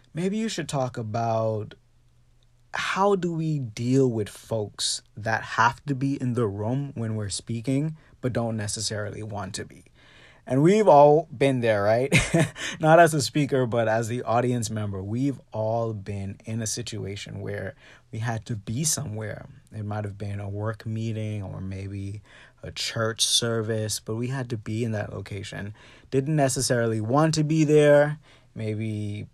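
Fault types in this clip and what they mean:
Nothing to list here, as no technical faults turn up anywhere in this bit of speech.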